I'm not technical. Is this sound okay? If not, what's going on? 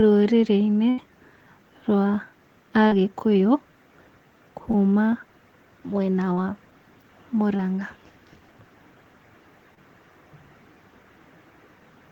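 No. Just under a second in, from about 0.89 to 1.00 s, the voice briefly turns into a held buzz or a fading hiss, and then jumps ahead with roughly 80 ms of speech missing. This is a burst of packet loss. Part of the call arrived too late or not at all, so the receiver stretched the last sound to cover the hole and quietly dropped what was lost.

Five more spots sound like tiny smears or wobbles, and a quick sound like a consonant may vanish. They come at about 2.88, 4.71, 6.33, 7.57 and 9.75 s. Each is short concealed packet loss. A sliver of 20 to 40 ms never made it through, and the receiver guessed the missing bit by continuing the sound before it, then blended back into the real speech.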